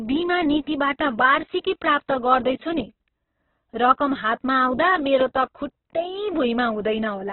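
Throughout the speech the sound is muffled and grainy, with rough, noisy texture and nothing above about 4.1 kHz. This is likely heavy Opus compression in its CELT mode: starved of bits, it narrows the band and fills detail with noise, which fits a rate near 8 kbps.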